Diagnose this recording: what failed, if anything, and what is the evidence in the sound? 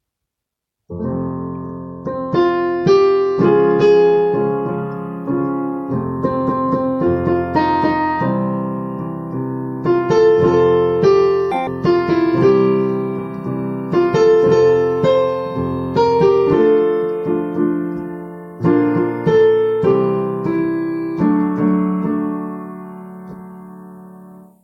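Sample-format conversion fault: from 11.52 to 11.67 s the audio was read two samples at a time, running at double speed, an octave higher.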